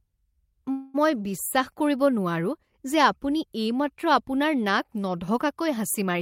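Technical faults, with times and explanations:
0.71–0.96 s, call audio freeze: the speech stalls for about a quarter of a second. The last sound is carried on as a fading buzz or hiss, covering about 227 ms. No silence is heard inside the gap. The speech then resumes with "মই বিশ্বাস কৰিব", picking up where it stopped. Nothing seems to be lost. Instead the rest of the clip runs about 227 ms late. This likely comes from delayed packets draining the jitter buffer, with the receiver filling the wait.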